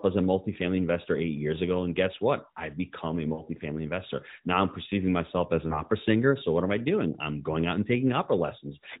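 Speech heard through AMR narrowband mobile coding, band-limited below 4 kHz, has two short glitches from lost AMR speech frames. From 3.34 to 3.42 s the sound smears and sags, which fits about 40 ms of missing frames, and from 5.68 to 5.82 s there is a further warble, about 20 ms lost. Where frames failed their checks, the decoder replayed the last good pitch and spectral shape at falling level before recovering.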